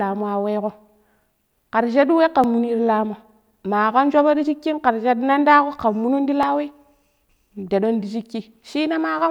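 At 2.44 s and again at 6.43 s the speech skips, a tiny jump where a few milliseconds vanish and the two sides butt together. The 4 s spacing points to audio missing between chunks, likely lost as one chunk closed and the next opened.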